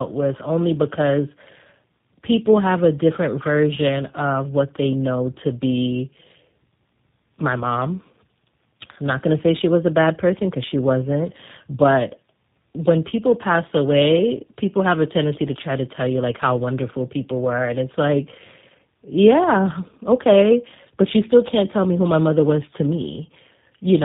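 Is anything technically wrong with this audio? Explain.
Yes. Tandem speech coding runs throughout: the speech went through GSM full rate at 13 kbit/s, then G.711 A-law, then G.729A at 8 kbit/s. Two low-rate speech coders in a row, the second re-encoding the first's errors, left it rough, muffled and warbly, with nothing above 3.7 kHz.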